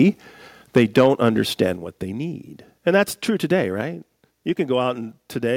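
From 0.76 to 1.62 s the loudest syllables turn harsh and crackly with flattened peaks, likely microphone overload driving the input about 5 dB past the converter's limit.

Sudden level drops at 0.78 s (about 2 dB) and 1.77 s (about 4 dB) hit speech and background alike, likely the microphone volume being stepped down in response to the clipping.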